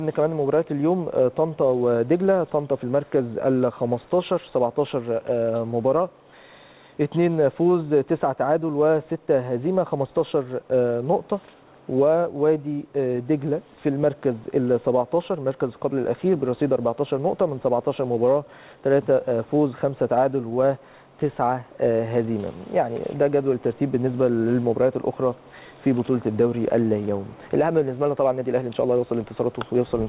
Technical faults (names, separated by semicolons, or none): none